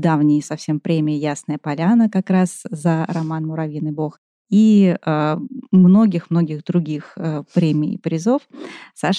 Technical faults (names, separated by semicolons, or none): none